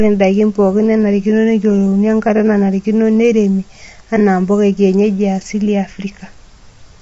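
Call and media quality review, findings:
Plainly audible coding damage throughout the speech, nothing above 7.7 kHz; likely low-delay AAC compression, coarse per-frame spectral quantization consistent with roughly 24 kbps AAC-ELD.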